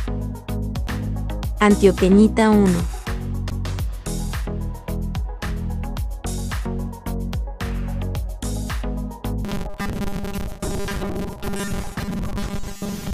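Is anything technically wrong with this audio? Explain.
Yes. From 9.45 s to the end, the sound turns into a rigid, metallic buzz fixed at 200 Hz that only loosely tracks the underlying audio. This is robotic sound from repeated short buffers. The likely cause is that new audio arrived too seldom, so playback filled the gaps by looping the last chunk, which fits a 5 ms buffer. About half of what is heard is repetition, and the skipped audio is lost.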